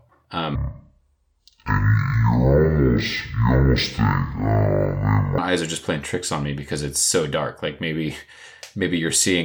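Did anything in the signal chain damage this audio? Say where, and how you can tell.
Yes. From 0.55 to 5.38 s the speech plays at half speed and an octave low, the mark of stereo read as mono at the sample-format stage: interleaved left and right samples run as one channel. Unlike a plain wrong-rate playback, a fainter mirror image fills the upper spectrum.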